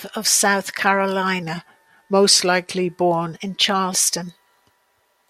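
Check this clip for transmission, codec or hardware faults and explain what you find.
One fault here: a wrong sample rate stretch from 1.42 to 3.34 s. For that stretch the speech drops in pitch and slows down together, because the samples are being clocked out slower than they were captured, with no rate conversion in between. Speed falls to 0.919 of normal and pitch sinks by 1.47 semitones, which fits 48 kHz material played back at 44.1 kHz. It comes across as slightly low and sluggish, then snaps back to normal.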